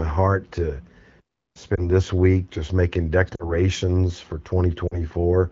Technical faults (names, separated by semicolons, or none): lost AMR speech frames